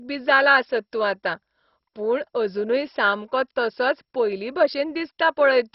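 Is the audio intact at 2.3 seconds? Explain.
No. At 2.3 s, as throughout the speech, nothing remains above 5.6 kHz, and heavy gurgling, granular distortion points to likely MP2 compression with bands starved of bits, consistent with roughly 32 kbps.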